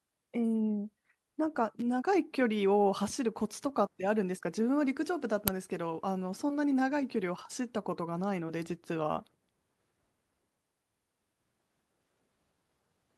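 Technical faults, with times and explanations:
1.79 to 1.82 s, electrical switching spike: a sharp snap sits on top of the speech for under 30 ms. That's most likely a nearby switch, relay or static discharge arcing and getting picked up by the audio line.
5.48 s, uninitialised buffer: a very brief, loud crack, about 2.7 ms long, which fits a 128-sample block. The buffer was played out before any audio had been written into it, so whatever junk was sitting in memory came out as samples.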